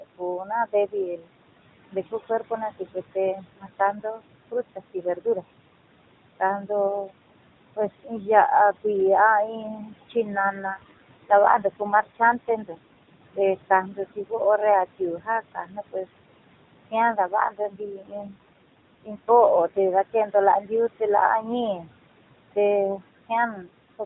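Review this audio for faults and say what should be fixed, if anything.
Noise suppressor artifacts run through the whole clip. The suppressor pulls the room noise down by about 21 dB between phrases and lets it back up under the voice, so the background pumps with the speech instead of sitting at a steady level. The gain is set band by band for each frame. To prevent this, reduce the suppression depth and smooth its gain over time so the residual noise stays steady.

Speech cut by the noise suppressor affects two spans, 0.0 to 5.44 s and 6.4 to 24.01 s. Within them, soft consonants, word endings and quieter stretches fall below the suppressor's threshold and are treated as noise. They drop by as much as about 22 dB in the first span and about 21 dB in the second, adding up to roughly one and a half seconds and four seconds of swallowed or faint speech. To prevent this, lower the decision threshold or add a speech-presence guard so low-level voiced and unvoiced sounds are not classed as noise.

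An AMR rate drop occurs twice, from 10.36 to 13.20 s and from 17.14 to 20.09 s. In both, the AMR-NB codec falls from 12.2 kbps to 5.9 kbps, the kind of switch a weak radio link forces so that more bits go to error protection. The bandwidth stays the same and nothing drops out, but the voice turns audibly buzzier and more synthetic until the rate returns to 12.2 kbps. To prevent this, improve the radio link quality or coverage so the network has no need to lower the codec mode.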